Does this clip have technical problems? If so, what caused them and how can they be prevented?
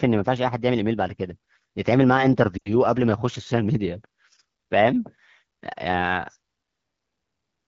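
Yes. Lost AMR speech frames at 2.57 to 2.60 s cause a brief dip toward near silence. The decoder repeated the last good settings at falling gain, which fits about two dropped frames. On a spectrogram the harmonics briefly smear and fade; the waveform shows a short amplitude sag. Better radio coverage or stronger channel error protection would prevent this.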